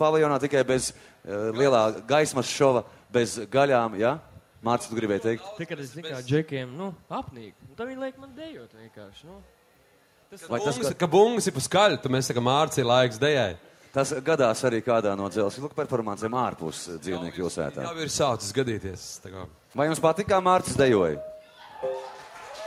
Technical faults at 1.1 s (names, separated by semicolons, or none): none